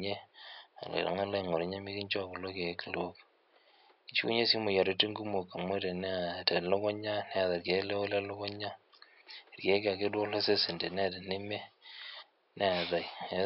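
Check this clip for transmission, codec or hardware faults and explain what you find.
No transmission, codec or hardware faults turn up in this clip, and the faint room noise sitting about 36 dB below the speech is part of the recording rather than a fault.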